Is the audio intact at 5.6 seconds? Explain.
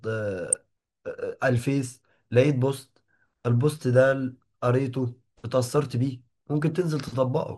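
No. At 5.6 seconds the speech carries the same MP2 compression damage heard across the whole clip. It sounds dull, with a gurgling, granular roughness, which fits a low rate around 80 kbps. The likely cause is Layer II coding starving its 32 sub-bands of bits, so upper bands drop out and the rest are coarsely quantised. A spectrogram shows the top end cut off and blocky bands flickering on and off.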